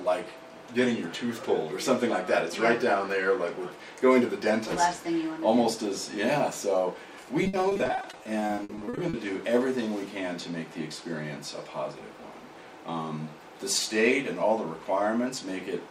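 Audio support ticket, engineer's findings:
Repeated packet loss (robotic sound), 7.43–9.15 s. Choppy texture, pieces missing; around two dozen short holes, longest 60 ms, each patched by stretching the preceding sound. Concealment covers about a third of the span, roughly 580 ms. Probable component: network path / jitter buffer, receiver-side loss concealment. Distinct from a single dropout: holes recur rapidly and are filled, not silent. Unlike low-bitrate codec smearing, damage is confined to this window and gated in time.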